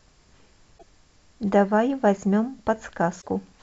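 Damaged data in a compressed stream corrupts two stretches of this speech, from 0.77 to 0.83 s and from 3.18 to 3.26 s. At each, the decoder misreads the broken frames and loses sync while it hunts for the next valid header, leaving a brief glitch.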